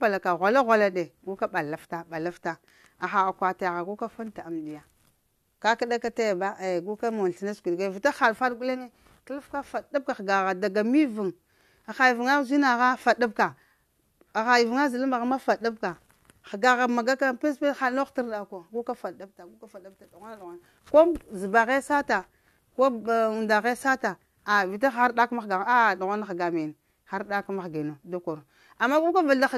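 A speech recording with nothing technically wrong with it.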